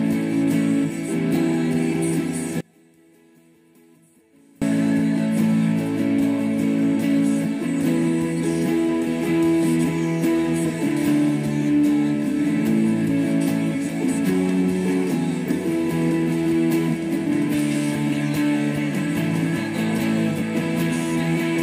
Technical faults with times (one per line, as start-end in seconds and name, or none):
2.61-4.62 one channel inverted